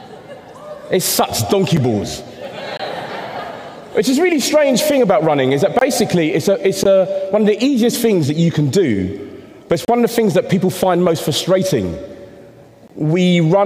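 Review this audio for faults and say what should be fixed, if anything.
The sound drops out in six short holes of gap between stream segments: at 1.77 s, 2.77–2.80 s, 5.79–5.81 s, 6.84–6.86 s, 9.85–9.88 s and 12.88–12.90 s, each lasting roughly 6 to 32 ms. They fall on 1 s segment boundaries, where timestamps leave a slot that the player fills with silence. On a waveform each is a flat silent run with abrupt edges, and on a spectrogram a thin vertical blank stripe. Timestamping segments contiguously at the packager would prevent this.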